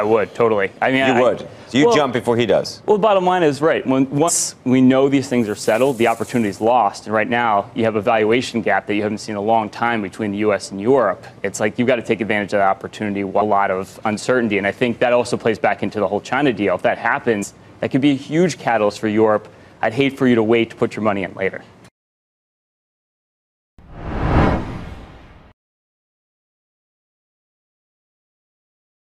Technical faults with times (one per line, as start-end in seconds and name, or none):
4.27 damaged data in a compressed stream
13.40 damaged data in a compressed stream
17.42-17.44 damaged data in a compressed stream